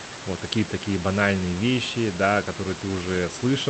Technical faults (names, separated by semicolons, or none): none